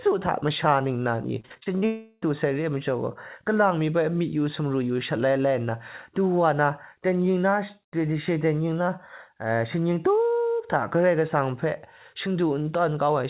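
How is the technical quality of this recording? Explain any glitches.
The recording has two closely linked network glitches early on, and the whole clip is band-limited with nothing above 4 kHz, which fits G.711 mu-law telephone coding.

From 1.40 to 1.84 s there is repeated packet loss with a robotic sound. Six short gaps, the longest 45 ms, are patched by repeating earlier sound. The result is choppy with pieces missing, and it shows as stuttering, smeared blocks on a spectrogram.

From 1.86 to 2.24 s there is a longer gap, likely a long network dropout. About 0.36 s is filled with a fading continuation of the last sound, then a brief silence. On a spectrogram it looks like a smooth smear that decays to near-flat.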